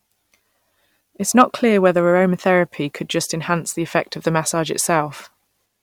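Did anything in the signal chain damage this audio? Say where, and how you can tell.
Yes. At 1.40 s, just before "clear whether aromatheraphy could", there is a brief crackle on a peak in the speech, a short burst of grit that is gone almost as soon as it starts. This is hard clipping at a converter or fixed-range level stage. The signal ran about 2 dB past what that stage could pass, so the top of the waveform was cut flat. The squared-off peak adds harmonics high in the spectrum, which is heard as the crackle.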